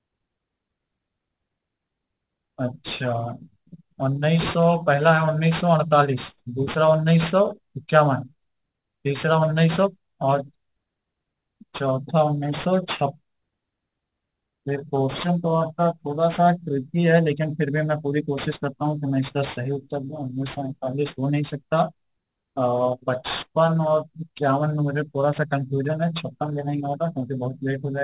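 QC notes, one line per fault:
throughout: aliasing. Downsampling skipped its anti-alias filter, consistent with an 8 kHz rate, so sibilant energy above 4 kHz folds back, gritty and metallic, roughly 20 dB down.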